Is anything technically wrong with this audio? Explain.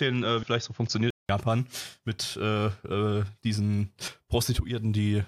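Yes, there are two kinds of fault. From the start to 1.29 s, the recording was likely taking its input from a poorer microphone or headset before switching to the proper one. That device passes nothing above 6.9 kHz, so the speech sounds dull and boxy. It also adds a faint noise floor, without a noticeable level change, and a gap of about 0.19 s marks the switch.

Damaged data in a compressed stream appears at 0.42 s and from 4.07 to 4.09 s. Corrupted bytes made the decoder misread frames and lose sync until it found the next valid header, producing brief glitches.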